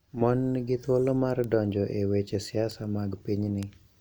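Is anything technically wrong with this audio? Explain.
Yes. Bit error spikes appear in this speech at 1.44, 2.71 and 3.63 s. Each is a flipped bit making one sample, or three at 3.63 s, jump by a power of two and snap back. Each is heard as a sharp, broadband tick, peaking about -18 dBFS, unrelated to the speech.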